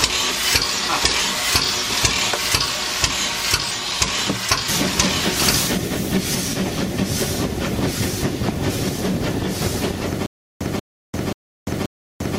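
From 10.26 s to the end, playback likely stalled, and at each retry the player replayed its last fragment before running dry again. The result is a stutter with silent gaps: a burst of about 187 ms of audio repeats four times, each followed by about 345 ms of digital silence, so the same fragment returns every 532 ms at a steady, mechanical pace. Whatever should have played over those final seconds is lost.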